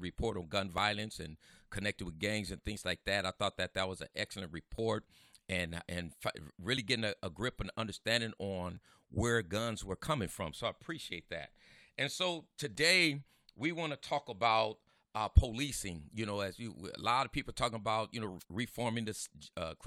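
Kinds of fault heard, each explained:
Overlap between stream segments: Where two 2-second segments' timestamps overlapped, the player trimmed sound that wasn't actually duplicated. About 15 to 20 ms of speech vanishes at 0.78, 2.77, 4.78, 6.77, 8.77, 10.76, 12.75 and 14.74 s. The waveform shows sudden discontinuities, and the spectrogram shows thin vertical broadband lines.
Wireless microphone noise hit: The FM radio link from the microphone faded briefly as reflected signals cancelled, so receiver noise rose over the speech. A short burst of static is heard from 18.39 to 18.44 s. It looks like a dense noisy patch in the waveform and a brief broadband smear on the spectrogram.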